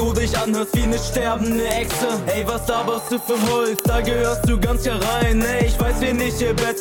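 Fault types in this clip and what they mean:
Uninitialised buffer: at 1.71 s and 3.79 s, a block was played before any audio was written into it, so stale memory came out as samples. Each event is a brief crack, lasting 1.45 ms and 2.9 ms, fitting 64-sample and 128-sample buffers.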